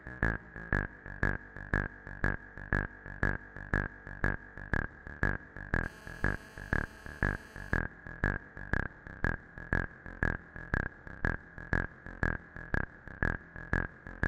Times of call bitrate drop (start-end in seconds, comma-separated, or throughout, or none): none